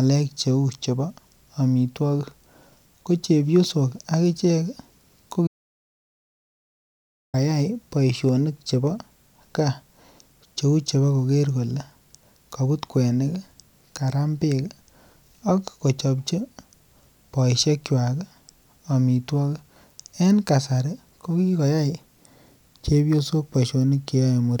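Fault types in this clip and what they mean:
Audio dropout to silence: the speech cuts to silence from 5.47 to 7.34 s. No room tone remains. The input was likely lost briefly.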